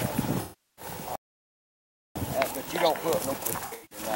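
From 0.41 to 0.85 s the sound turns into a smeared, noisy or phasey patch instead of clean audio. This is AAC frame loss with concealment. About 363 ms of coded audio went missing, which fits a run of roughly 17 AAC frames. The decoder covered the gap by rebuilding the signal from the last good spectrum, with either scrambled signs or interpolated energy, so what fills the hole is an imitation of the preceding sound.

At 1.16 s the audio stops dead in mid-flow and stays silent for about 1.0 s, resuming at 2.16 s. This is a playback stall, likely caused by the player running out of data or its thread being blocked. Output simply halted until playback could continue.

From 3.65 to 3.99 s the same smeared, concealed texture returns, this time broken up. This is AAC frame loss with concealment again. About 213 ms was lost in pieces scattered across 256 ms, and the longest single gap is around a tenth of a second.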